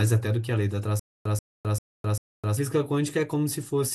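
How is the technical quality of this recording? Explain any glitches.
The recording has one clear glitch. A stutter with silent gaps runs from 0.99 to 2.57 s. This is likely a playback or stream stall. At each retry the same 134 ms fragment of speech replays, followed by about 260 ms of dead digital silence, so it repeats every 394 ms, four times in all. The speech that belonged in that stretch is missing.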